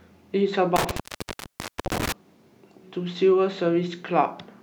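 At 0.76 s the speech starts to break up from an intermittent contact. A loose cable or plug is losing its connection. The line opens and closes until 2.12 s. In that span the signal is gone for about 955 ms in total. The dropout cuts the speech off abruptly. Crackle marks the edges where the contact scrapes open and shut. During the gaps a faint hiss remains.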